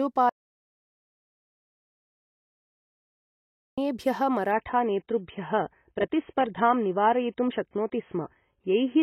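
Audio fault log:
0.29–3.78 s: audio dropout to silence. About 3.5 s of the speech is lost and replaced by silence with no room tone, so it is not a natural pause. The abrupt cut-out and return mid-flow point to a likely lost input or mute while recording continued.
4.52 s to end: adaptive stream at a lower bitrate. The speech suddenly turns dull and smeared, with nothing above 3.8 kHz and audible codec artefacts. There is no gap, unlike a dropout. The sound fits a step from roughly 96 to 16 kbit/s AAC.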